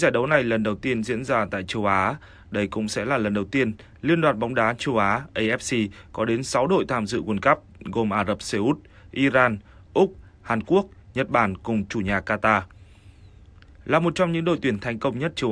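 No technical faults can be heard anywhere in the recording.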